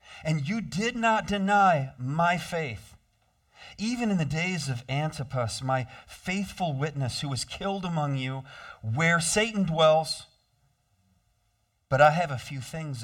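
Channel delay (comb filtering) runs throughout the speech, from start to finish. One channel arrives roughly 1.5 ms behind the other, and when the two are summed to mono, content shared by both cancels at regularly spaced frequencies. The first notch falls somewhere around 300 Hz, with further dips repeating up the spectrum at intervals of roughly 670 Hz. The voice sounds hollow and phasey, with a fixed colouration that never changes.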